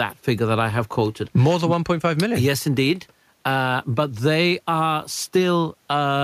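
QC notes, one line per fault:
No faults found in this speech recording. Nothing here calls for a timed entry.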